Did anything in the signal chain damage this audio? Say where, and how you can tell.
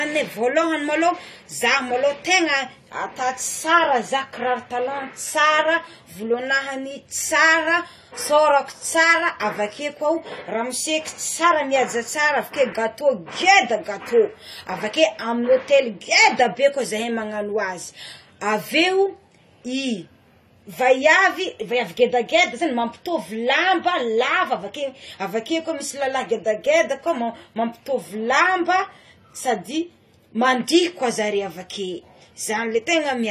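Yes. AAC compression damage runs throughout this speech: nothing reaches above 14 kHz, and sibilants sound fizzy and smeared. The codec stage is the likely cause. An AAC-LC encoder starved of bits, consistent with about 32 kbps, lowers its cut-off and coarsely quantises the spectrum it keeps.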